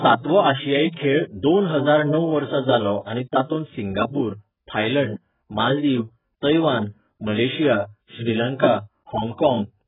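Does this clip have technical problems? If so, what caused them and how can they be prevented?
Yes. Throughout the speech there's heavy AAC compression damage, likely from AAC-LC encoding at a very low bitrate, something in the region of 8 kbps. Nothing survives above about 3.8 kHz, so the sound is dull and muffled, and with so few bits per frame the encoder leaves gaps in the spectrum that come across as a swirly, fizzy smear on sibilants and held sounds. To prevent it, encode at a much higher bitrate or keep an uncompressed master.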